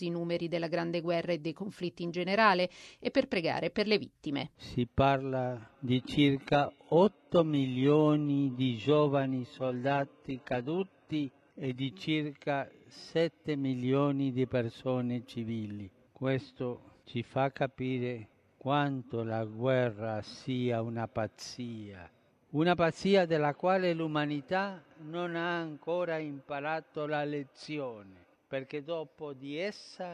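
From 5.88 to 11.88 s the adaptive stream drops to a lower bitrate after the connection slows. Codec artefacts rise, which fits a switch from 96 kbit/s AAC-LC to 16 kbit/s HE-AAC. Both changes are sudden and gapless.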